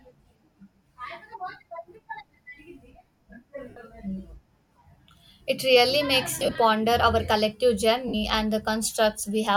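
Brief noisy smears break the speech at 3.69 to 3.77 s, again from 6.39 to 6.56 s between "really makes" and "our collective", and at 8.08 to 8.14 s just after "our collective". These are lost LE Audio frames. The middle event is scattered dropouts rather than one gap, the longest about 30 ms. Each gap's length fits whole 7.5 ms frames. The LC3 decoder fills the holes by repeating the last spectrum with randomised signs, so tonal detail turns to hiss.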